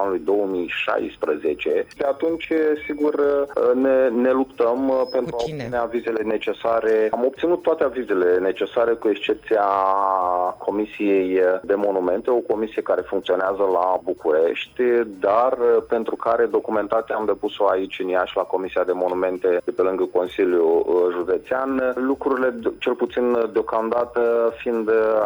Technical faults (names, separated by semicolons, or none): none